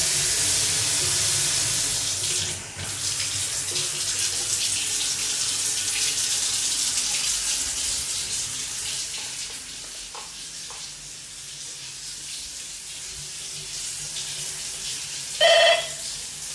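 A recording of everyday sounds whose signal carries no audible technical faults at any point.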